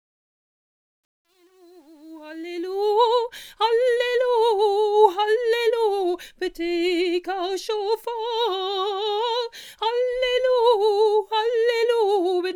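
The audio opens with a fade-in that reaches full level at 2.92 s, and its quiet start carries truncation distortion on a fade: the gain stage keeps only about 10 bits with no dither, so from 0.0 to 2.25 s the low-level waveform collapses into coarse steps, sounding gritty before it clears.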